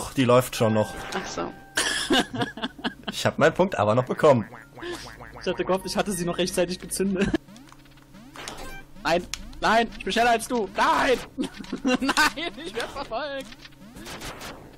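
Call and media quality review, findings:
Low bit depth without dither, whole clip: grainy distortion tracking the signal, quiet passages gritty, faintest parts sputtering between steps. Likely a rounding requantiser with no dither, consistent with a 9-bit signal. Error roughly 40 dB under the signal. Spectrogram: signal-shaped hash, no flat floor. Waveform: visible stair-steps at low level.

Stream segment skipped at 7.35 s: abrupt jump ahead with a small blip and a chunk of the programme missing. Likely a segment that failed to load, with the player continuing at the next one. Waveform: hard discontinuity at the splice. Spectrogram: thin vertical broadband line.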